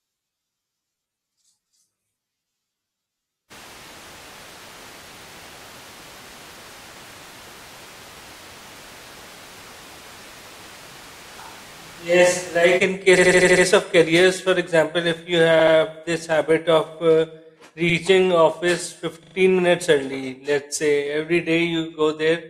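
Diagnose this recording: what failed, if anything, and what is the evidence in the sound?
From 3.52 to 12.77 s the speech turns abruptly roomy and hollow, with thinner bass, roughly 10 dB lower and room noise only about 25 dB down. This is likely a switch to a distant microphone at the capture stage. Unlike EQ or gain faults, the reverberant room character arrives and leaves instantly.

Repeated frames at the codec or storage stage cause stutters at 13.17–13.65 s (an 80 ms block replayed six extra times, adding 480 ms), 15.59–15.75 s (80 ms, twice, 160 ms), 17.89–17.95 s (60 ms, once) and 19.23–19.35 s (40 ms, three times, 120 ms). Each block fits a run of a few compressed frames. Unlike dropouts, identical sound recurs and the clip gets longer.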